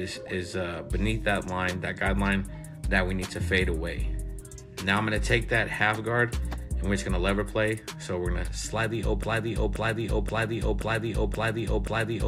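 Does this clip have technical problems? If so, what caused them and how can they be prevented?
Yes, there's a broken-record loop from 9.23 s to the end: a 0.53 s fragment repeats six times, likely a stalled player or stream resending its last buffer. Watchdog buffer underruns and restart the stream instead of replaying stale data.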